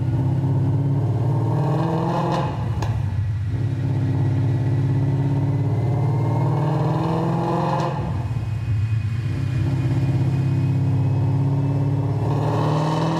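No technical faults can be heard anywhere in this audio.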